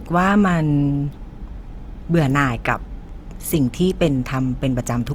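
The speech has likely been through Opus compression in its music (CELT) mode at a low rate, which fits about 24 kbps. With too few bits to go round, the encoder keeps each band's overall energy but fills the missing detail by copying lower bands or inserting noise. From start to end this damage is plainly audible: the speech takes on a grainy, rough, noisy texture, while the full bandwidth still reaches about 20.2 kHz.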